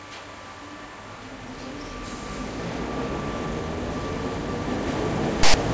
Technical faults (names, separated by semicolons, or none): file tags played as audio